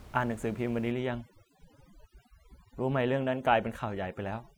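Speech with room noise sitting about 22 dB below the voice shows overdone noise removal from 0.92 s to the end. Aggressive spectral gating drops bands near the noise estimate, leaving near-silent gaps with twinkling specks.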